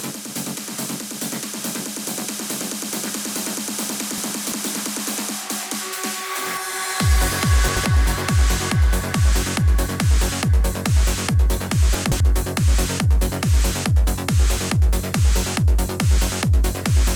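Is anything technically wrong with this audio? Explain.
Yes. Chunks out of order occur at 4.18–4.52 s, 7.68–7.85 s and 11.95–12.20 s: an 85.33 ms block arrives three, one and two chunks late, so the sound jumbles briefly.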